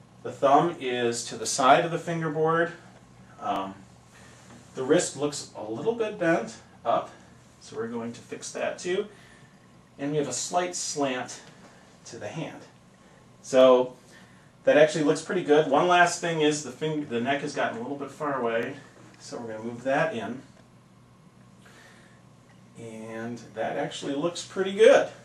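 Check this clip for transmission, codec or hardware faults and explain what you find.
One fault recurs: overlapping chunks. The audio was handled in 5.0 s blocks, and each block began about 23 ms before the previous one finished, so that slice of audio plays twice at every join. The repeats fall at 3.56–3.58, 8.58–8.61, 13.61–13.63, 18.63–18.65 and 23.65–23.68 s, each heard as a brief click or stutter recurring every five seconds.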